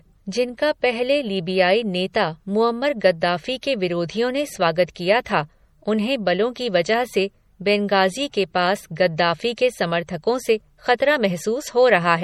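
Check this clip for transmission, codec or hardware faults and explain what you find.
Two codec faults are audible in the speech.

Throughout, the speech sounds watery and swirly, with chirpy s sounds. That is likely MP3 compression at a low bitrate, around 48 kbps. Starved of bits, the encoder zeroes weak spectral lines that flicker between frames.

At 3.61 s, between "लीबियाई नेता मुअम्मर गद्दाफ़ी" and "के विरोधियों ने स्वागत", a sharp onset is smeared, with a short hiss about 16 ms ahead of it. This pre-echo occurs because the transform block spreads quantisation noise sized for the loud attack back into the quiet moment before it.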